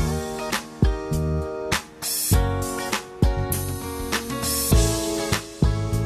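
No technical faults can be heard anywhere in the audio, and the signal holds steady throughout with nothing in its level, timing or continuity that points to a problem in the recording or playback chain.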